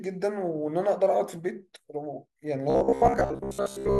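Robotic sound from repeated short buffers affects this speech clip from 2.70 to 3.99 s, a rigid metallic buzz near 66.8 Hz, likely from the same 15 ms segment looping in place of most of the incoming audio.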